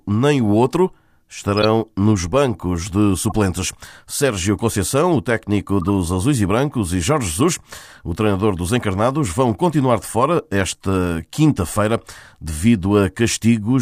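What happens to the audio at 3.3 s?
At 3.3 s the audio is at the tail of a corrupt frame decoded event running from 3.16 to 3.32 s. Bits inside a run of about seven compressed frames were damaged. The decoder played them anyway. Misread gains and codes pushed energy into the wrong frequency bands for those frames. The result is a short burst of chirpy noise lasting about 0.16 s. It peaks at roughly -10 dBFS.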